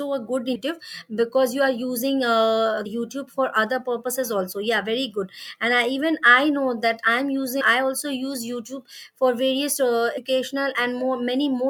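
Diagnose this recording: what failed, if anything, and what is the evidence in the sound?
Compressed frames skipped at the codec stage. The speech jumps ahead at 0.54, 2.85, 7.60 and 10.17 s, losing roughly 300 ms first, then 100 to 150 ms. Each jump is a run of whole 24 ms frames left out of playback.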